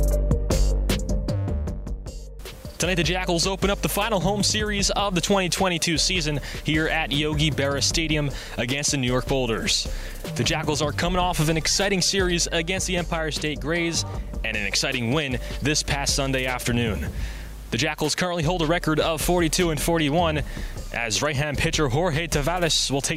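No technical faults can be heard anywhere in the clip.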